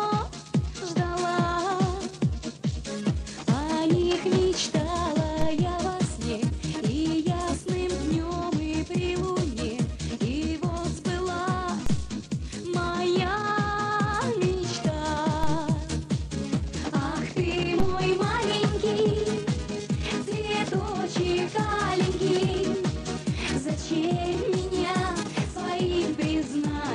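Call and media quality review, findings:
DC step: low thumps at 5.42, 11.86, 15.44 and 17.80 s. Baseline jumps about -18 to -16 dBFS, then decays through a 2 Hz high-pass. Probable converter offset switching.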